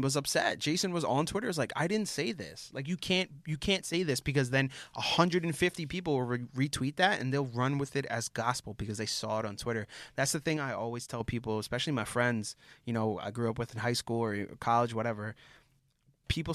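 Speech with three abrupt dips of about 6 dB, at 3.81–3.94 s, 10.57–11.20 s and 15.79–16.24 s, likely one channel dropping out; the hard-edged step, not a fade, separates it from gain riding.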